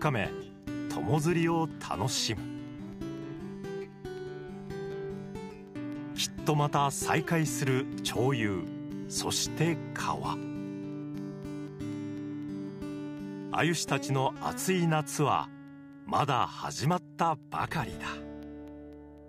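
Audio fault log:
0.18–19.18 s: periodic USB or driver dropouts. Every 0.25 s the stream briefly stalls and a fraction of a millisecond of audio is replaced by silence, roughly seventy times in all, producing evenly spaced ticks that are audible only where signal is present.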